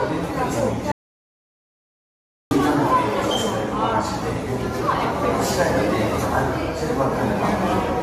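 Throughout, the sound is swirly and hollow, with smeared attacks and nothing above 14 kHz. That is generation loss, likely from around seven passes through AAC-LC at what sounds like 64 kbit/s, each pass requantising on a new frame grid so the errors accumulate.

From 0.92 to 2.51 s the sound cuts to complete silence, with no room tone beneath it, then resumes mid-flow, losing about 1.6 s. This is an audio dropout to silence, likely from a lost input while the recorder kept writing silence.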